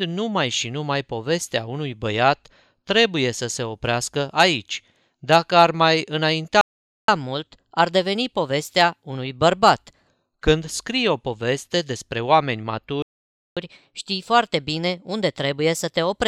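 The clip is speech with two playback stalls, each followed by catch-up at higher speed. At 6.61 s the audio cuts to silence for 0.47 s, then resumes at 7.08 s. A second stall comes after "o poveste despre oameni", silent from 13.02 s to 13.57 s, about 0.54 s. Each gap is most likely the player running out of buffered data or having its thread blocked, so nothing reaches the output until it recovers.

After each stall, the player works off its backlog by resampling faster. Right after "ar mai", from 7.08 s to 10.08 s, playback runs at 1.1 times normal speed. Pitch rises by about one and a half semitones, then settles. After "o poveste despre oameni", from 13.57 s to the end, the speed is 1.15 times. Pitch sits about two semitones high. This hurried, slightly raised sound is the catch-up at higher speed.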